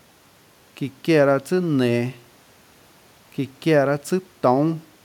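No technical faults can be heard anywhere here.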